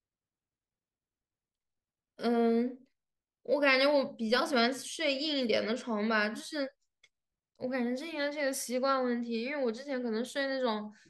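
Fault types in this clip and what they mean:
No technical faults can be heard in this speech recording.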